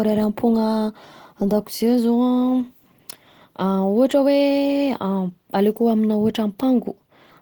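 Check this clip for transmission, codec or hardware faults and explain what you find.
One codec fault runs through the whole speech clip: plainly audible damage, likely Opus compression in hybrid mode at around 16 kbps. It sounds hoarse and grainy rather than swirly like MP3, and the bandwidth stays full, reaching about 20.1 kHz.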